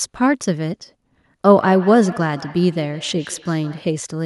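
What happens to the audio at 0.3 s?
Nothing goes wrong at 0.3 s: the speech carries on intact through that moment, with no dropout, click, distortion or other fault.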